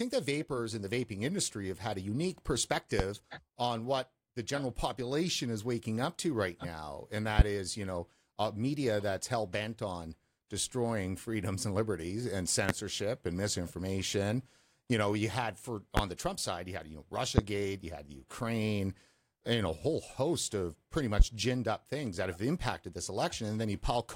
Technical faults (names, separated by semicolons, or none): loud pop